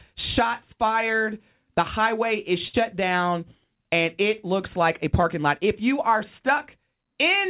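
A burst of packet loss at 2.68 to 2.75 s interrupts this speech recording: a run of call audio failed to arrive in time, so the receiver kept extending the last sound it had for about 53 ms, letting it fade as the gap continued, and then resumed further along, skipping roughly 60 ms of the original speech. A short concealed packet loss at 5.21 to 5.25 s is smaller: the missing 20 ms is bridged by about 14 ms of synthesised continuation of the preceding sound, blended back into the real audio, heard as a brief smear or wobble where a fleeting sound may drop out. The call path's narrowband coding, with nothing above 4 kHz, which points to G.711 mu-law, gives the speech its telephone-like bandwidth.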